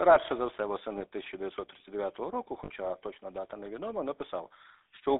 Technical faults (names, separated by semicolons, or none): GSM full-rate codec; lost GSM frames